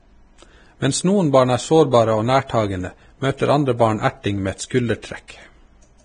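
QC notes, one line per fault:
throughout: Vorbis compression. Grainy, hissy speech with nothing above 9.7 kHz, likely from heavy low-bitrate coding near 23 kbps. The spectrogram shows a hard ceiling and speckled treble.
5.02; 5.28–5.30: pre-echo. Quantisation noise leaks about 15 and 21 ms ahead of sharp onsets, softening them. The waveform shows short hiss before each attack.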